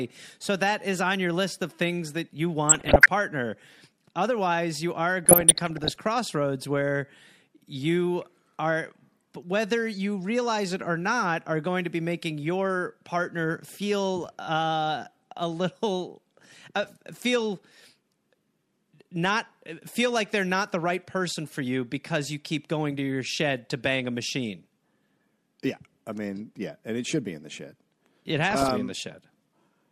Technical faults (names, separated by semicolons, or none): DAB burbling